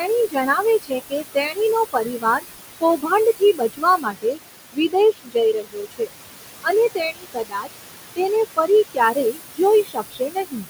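Speech with noise suppressor artifacts throughout. The room noise sits only about 8 dB below the voice and is pulled down by about 20 dB between phrases, then swells back under them. A simple gate would switch the background fully off and on instead. Speech cut by the noise suppressor occurs at 0.0–1.58, 1.93–2.44, 2.81–4.39, 4.72–6.11, 6.61–7.75 and 8.53–10.66 s, where soft consonants and word endings dip by about 17 to 22 dB and sound swallowed. Those dips track the suppressor mistaking quiet speech for noise rather than the talker simply trailing off.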